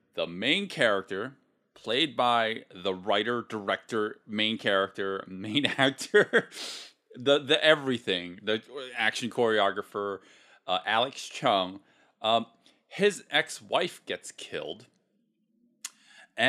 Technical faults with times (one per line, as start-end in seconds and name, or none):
none